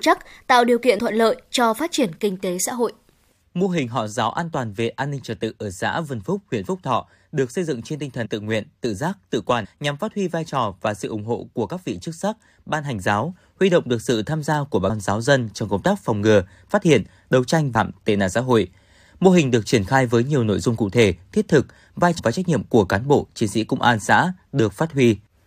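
Compressed frames skipped at 0.98 s, 8.25–8.27 s, 9.64–9.66 s, 14.89 s, 17.74 s and 22.18–22.20 s. Whole blocks of coded speech never get played. The speech jumps ahead in steps that fit frames of about 23 ms. The gaps run from about 70 ms to about 700 ms. At 17.74 s roughly 0.7 s vanishes.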